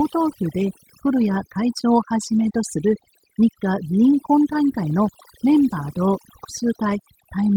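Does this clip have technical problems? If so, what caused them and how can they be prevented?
Yes. Overdone noise removal runs through the whole clip: a noise reducer set too strong pulls individual frequency bands down whenever they sit near its noise estimate, so the background breaks into twinkling, warbling specks and quiet parts of the speech thin out with it. Unlike low-bitrate codec burbling, these artefacts track the noise floor band by band rather than dulling the whole signal. Prevent it by lowering the reduction amount and checking results by ear.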